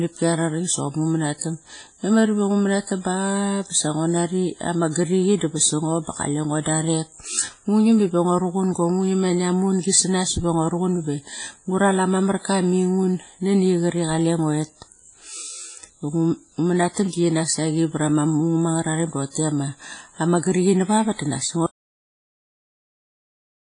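Throughout the speech, a low-bitrate transform codec, likely WMA compression at around 24 kbps, has thrown away detail. The damage is heavy: nothing survives above 10.3 kHz, quantisation noise smears and rings around the speech, and a washy hiss swells and fades with it.

From 21.66 s to the end, the input appears to have been lost while recording carried on. This audio dropout to silence cuts the speech off mid-flow, leaving dead silence with no room tone, and the speech from that point is gone.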